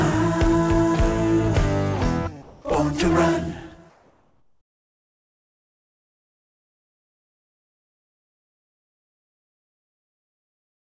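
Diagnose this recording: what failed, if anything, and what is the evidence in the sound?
At the call-processing stage, the sound is cut between 2.42 and 2.64 s and replaced by 220 ms of steady, featureless noise, losing about 100 ms of real sound before it resumes. This is likely sound dropped by the voice detector: the sender judged quiet material to be background, stopped transmitting, and the receiver filled the gap with comfort noise. Packet-loss concealment would instead smear or repeat the preceding waveform rather than substitute flat noise.

From 3.90 s to the end, about 7.0 s, the background loses its texture and becomes a uniform hiss sitting roughly 63 dB below the loudest passages and about 2 dB quieter than the real background before it. This is likely comfort noise in place of the background. During pauses, discontinuous transmission sent only occasional noise descriptions, and the receiver synthesized a matching noise floor. 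A noise suppressor would leave residual detail that fluctuates, but this noise is smoother. Like the rest of the G.722 call audio, it has nothing above 8 kHz.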